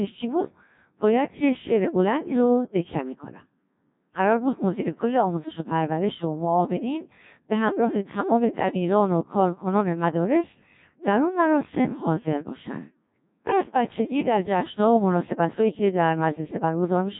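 From start to finish, the speech passes through a Codec 2 vocoder. Only pitch, voicing, energy and a rough spectral shape survive, and sine waves rebuild the voice. It sounds robotic and buzzy, which fits about 1.3 kbit/s. Nothing remains above 3.8 kHz.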